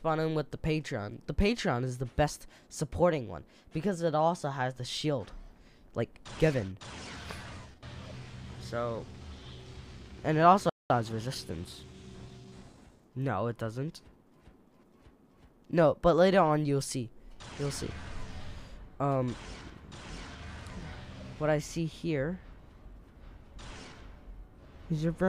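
At 10.69 s the sound cuts out mid-flow and stays silent for about 204 ms before resuming, a playback stall, likely the player running short of data or having its output thread blocked until it could recover and continue.

From 10.90 s to 12.92 s the audio runs hurried at normal pitch, about 1.1 times speed. This is time-compressed catch-up: the player trims its backlog by cutting out small pieces and cross-fading across the gaps.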